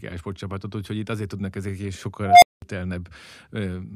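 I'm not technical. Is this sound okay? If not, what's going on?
No. Just after "azért tudnak ezek is", at 2.21 s, a whistle of around 700 Hz swells over about 0.2 s into a loud squeal, then cuts to 0.2 s of silence by 2.62 s. This is an unstable filter: a processing stage fed back on itself, grew out of control, and briefly shut off.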